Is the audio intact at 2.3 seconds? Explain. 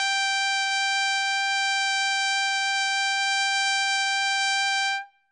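No. At 2.3 seconds the music carries the damage that runs through the whole clip, most likely WMA compression. The encoder's long transform blocks smear quantisation noise over tens of milliseconds and discard weak spectral lines, so the sound rings and washes, with a hiss that swells and fades with the music. A spectrogram shows a hard ceiling with nothing above 9.6 kHz and gaps where quiet detail was zeroed, which points to a bitrate of around 32 kbps.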